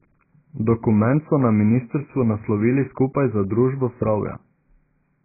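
From start to finish the speech sounds dull and boxy. Nothing comes through above about 2.5 kHz, so the top end is just gone, and what's left has a watery, warbling smear on the vowels and a fizzy, grainy edge where sibilants should be. That's heavy damage, most likely from AAC compression (AAC-LC) squeezed hard enough that the encoder dropped its cut-off and starved the remaining bands, which fits a very low bitrate of around 12 kbps.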